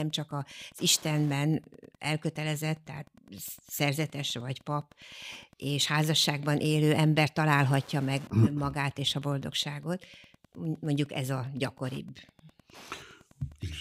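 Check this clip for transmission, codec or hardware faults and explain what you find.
One hardware fault runs through the whole speech clip: Wi-Fi interference. A nearby Wi-Fi radio's beacon, repeating every 102.4 ms, is rectified by the audio circuit into a faint, steady ticking about ten times a second, roughly 30 dB below the speech. Its exact 102.4 ms rhythm distinguishes it from mains hum or random crackle.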